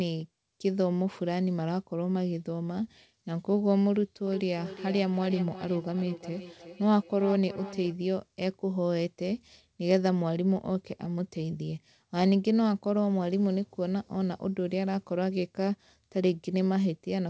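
Speech with a feedback echo between two devices from 4.27 s to 7.95 s: the sound comes back at a steady interval of roughly 0.4 s, each repeat thinner and more ringing, the loudest about 14 dB below the direct speech. Two nearby devices on the same call re-capture each other's playback, which neither echo canceller removes. Room reverberation would be a smooth decay, not distinct, evenly spaced repeats. The call path has an 8 kHz ceiling throughout.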